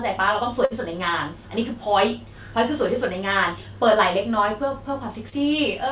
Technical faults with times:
0.65-0.73 burst of packet loss
5.29-5.35 short concealed packet loss

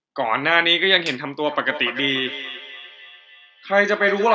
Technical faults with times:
1.46-4.35 feedback echo between two devices

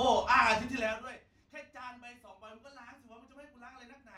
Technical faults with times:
0.77-1.20 zipper noise

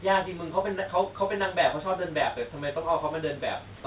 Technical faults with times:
3.76-3.84 comfort noise in place of the background

